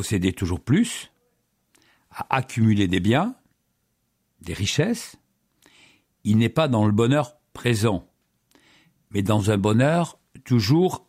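Nothing technical stands out anywhere in this speech recording; it's a straightforward listen with no faults to point to.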